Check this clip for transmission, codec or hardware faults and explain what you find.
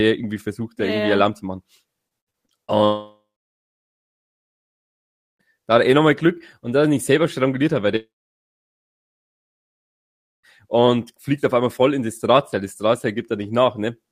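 There are two kinds of network trouble in this speech clip, both near the start and middle.

Repeated packet loss (robotic sound) runs from 2.07 to 2.71 s, right after "zu machen". Five separate gaps hit in quick succession, the longest about 79 ms, and each gets patched by stretching the last bit of sound. About a third of that stretch is concealment rather than real audio, so it comes out choppy, with chunks missing.

Then there are two long gaps, almost certainly long network dropouts. The first runs from 2.84 to 5.42 s, ending just before "da hat er eh". The second runs from 7.96 to 10.46 s, between "selber stranguliert hat weil" and "und fliegt auf einmal". Each opens with a brief smeared buzz as the last sound is carried on, then falls to dead silence for roughly 2.2 and 2.4 s. The likely cause is that nothing arrived for that long, so the speech picks up later with that whole section gone.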